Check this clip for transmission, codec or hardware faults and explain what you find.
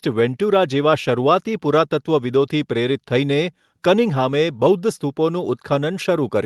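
No transmission, codec or hardware faults turn up in this speech recording. It went through a WebRTC call path with what sounds like the Opus codec, and the highs roll off at about 12 kHz, as that path normally does.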